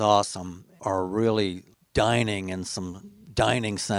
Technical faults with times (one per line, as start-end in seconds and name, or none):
none